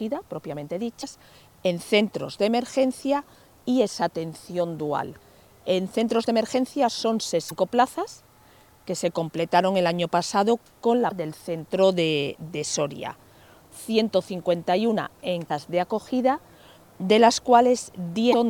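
The audio has damaged data in a compressed stream: five 40 ms glitches at 1.00, 7.48, 11.08, 15.47 and 18.30 s, where the decoder lost frame sync. Each shows as a narrow vertical broadband stripe on a spectrogram and an abrupt discontinuity in the waveform.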